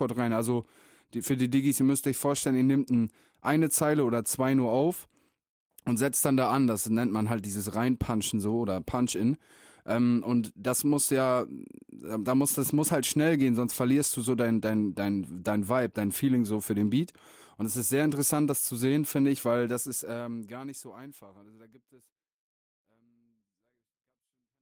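No faults: the speech shows only the light, full-band coding of an Opus voice codec in hybrid mode, and the level easing out from around 20 s to the end is a smooth editor's fade.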